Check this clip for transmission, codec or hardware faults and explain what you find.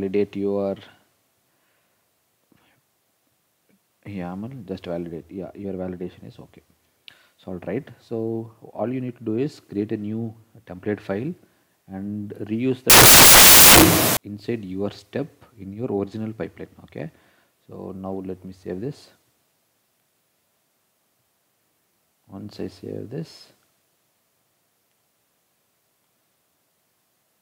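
One fault is present: samples built from the wrong bytes, from 12.90 to 14.17 s. For about 1.3 s the reader assembles each sample from misaligned or swapped bytes, so the rapidly changing low-order bits land in the high-order position and dominate every value. The result is a burst of loud, harsh broadband noise. Unlike clipping, which only flattens the peaks, it scrambles every sample in the span.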